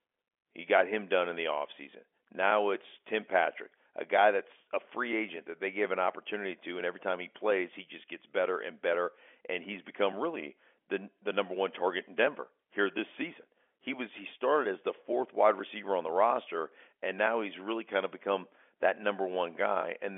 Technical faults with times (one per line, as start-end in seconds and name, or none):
none